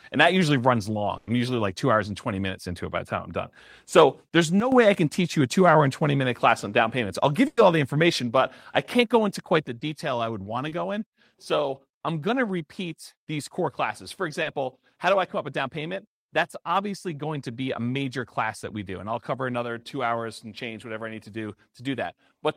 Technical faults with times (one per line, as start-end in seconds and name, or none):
1.17-1.28 burst of packet loss
4.60-4.72 sudden gain jump
7.47-7.58 burst of packet loss
9.68-22.56 sudden gain jump
9.79-9.82 short concealed packet loss
10.68-10.72 short concealed packet loss
14.42-14.46 short concealed packet loss
19.52-19.54 short concealed packet loss